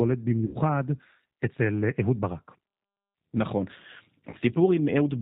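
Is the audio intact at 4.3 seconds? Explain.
No. From 4.30 to 4.36 s, VoIP packet loss concealed by the speech codec replaces about 30 ms of lost audio, consistent with three missing 10 ms frames, by extending the last pitch and filter. This produces a fading smear, a buzzy tone or coloured noise, that looks like a flat, decaying band on a spectrogram. Under it, the G.729 codec running at 8 kbit/s builds everything from pulses and a vocal tract filter, giving plainly rough, synthetic audio with nothing above 4 kHz.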